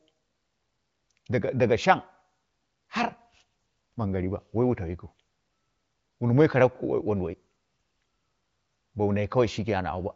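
The speech carries no technical faults; it has passed through the AMR wideband (HD Voice) codec at 23.05 kbit/s, where any coding damage is faint at most, and nothing is present above about 7.7 kHz.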